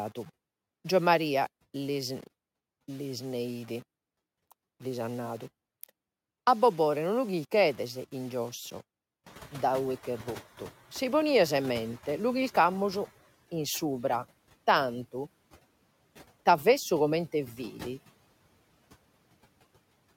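The whole clip has a grainy, gritty edge that moves with the speech and gets worse on quiet stretches. That's likely low bit depth without dither, around 7 bits with plain rounding, leaving the error about 30 dB under the signal and following it closely.

Right after "lu chirchedes in giosso", the room noise jumps by roughly 22 dB around 9.5 s. From 9.26 to 13.1 s you hear the noise suppressor catching up. The noise comes through with less reduction at first, then sinks by about 10 dB as the estimate adapts over nearly four seconds.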